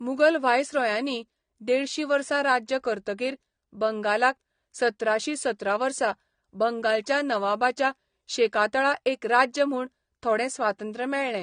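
Throughout, this is likely low-bitrate audio saved at a high bitrate: the large file cannot restore what was removed, so the speech stops dead above 9.7 kHz.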